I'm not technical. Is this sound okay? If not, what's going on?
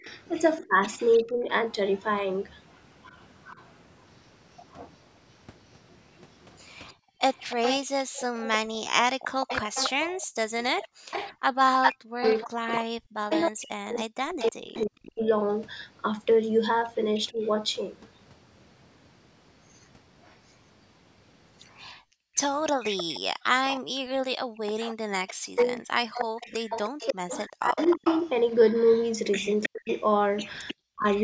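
No, this recording has three kinds of problem, all typical of a call where one side used a loudspeaker.

Speech suppressed in double talk: from 0 to 1.5 s, 11.44 to 17.37 s and 24.97 to 31.05 s, the voice itself fades or breaks up while both sides talk at once. The first time it dips for about half a second. Later it nearly disappears for around three seconds and then two. The likely cause is the echo canceller mistaking the talker for echo.

Echo leak: a second copy of the voice trails 0.31 s behind, like a repeat. It is barely there from 0.04 to 3.66 s, then much more noticeable from 6.86 to 30.74 s. Unlike the fading above, this adds sound rather than removing it, most likely from a loudspeaker's echo slipping past the echo canceller.

Background gated by the echo canceller: between 6.94 and 11.11 s, and again between 21.97 and 24.6 s, the room's background hush drops to near silence, for roughly 0.7 s in total each time, then returns. 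Here only the surrounding room sound vanishes, not the voice.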